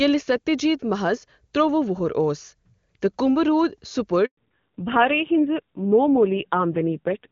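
At 4.25 s the speech fades out over a few tens of milliseconds and stays silent until 4.37 s, a 120 ms handover gap while the call switched networks and no speech frames arrived. Unlike a packet-loss dropout, it fades rather than cutting abruptly, and the sound that returns is different.

From 4.37 s to the end, the call falls back to narrowband. Above that point nothing exceeds 4 kHz, and the speech turns dull and rough where before it was clear wideband. The change fits a drop from AMR-WB at around 23.85 kbit/s to AMR-NB at about 5.9 kbit/s. A plain low-pass filter would only muffle the sound, but here the low-rate coding adds a raspy texture as well.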